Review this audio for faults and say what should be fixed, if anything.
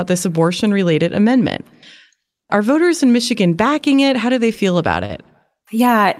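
There's one short concealed packet loss in this speech, from about 5.05 to 5.11 s. Roughly 40 ms of the stream didn't arrive in time, so the receiver's concealment covered the gap by extending the last bit of sound, about 38 ms of filler, and then crossfading back into the real audio. You hear it as a quick smear or wobble there. A bigger jitter buffer or forward error correction on the link should stop it.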